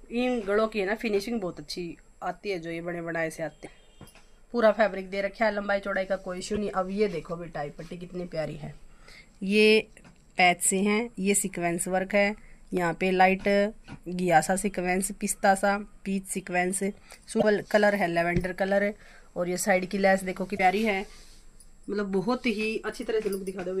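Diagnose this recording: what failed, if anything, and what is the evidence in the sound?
The compressed stream carries damaged data at four points, a codec-stage failure in which corrupted bytes leave the decoder misreading frames and losing sync until it locks onto the next valid frame header. Each event is heard as a short glitch: 3.62 to 3.68 s, 6.54 to 6.58 s, 17.39 to 17.44 s, and 20.55 to 20.60 s. Every burst lasts roughly 30 to 60 ms.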